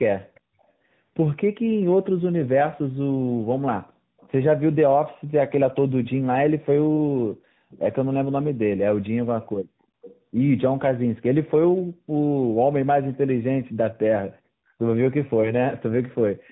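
Tandem speech coding runs throughout: the speech passed through two speech codecs in a row, each re-encoding the previous one's degraded output. It sounds rough, muffled and warbly, with nothing above 3.9 kHz, which fits a narrowband AMR-NB final stage.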